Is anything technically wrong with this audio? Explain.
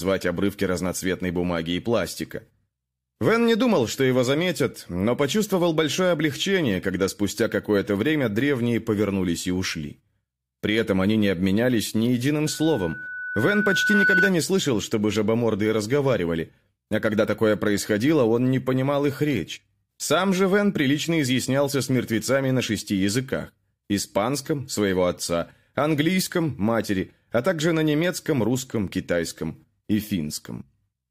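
Yes. There are two kinds of fault.

At 0.86 s and 8.41 s there are sharp single clicks. They are likely dropped samples. A fraction of a millisecond goes missing, so the waveform jumps.

From 12.45 s to 14.34 s a loudspeaker feedback squeal rises at 1.5 kHz. Over about one and a half seconds it grows to about 5 dB above the speech. The microphone picks up its own loudspeaker, and that tone keeps reinforcing itself.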